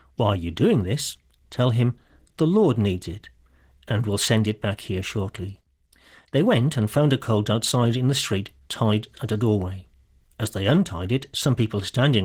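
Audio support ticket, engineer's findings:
Opus voice compression, throughout clip. Plainly audible codec damage on speech. Hybrid mode: SILK linear prediction below 8 kHz, CELT layer above, band open to 20.3 kHz. Coarse excitation coding fits about 16 kbps, 20 ms frames.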